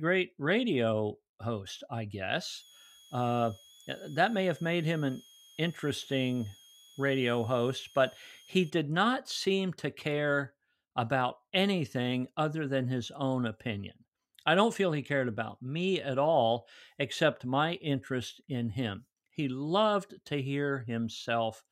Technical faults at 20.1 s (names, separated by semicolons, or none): none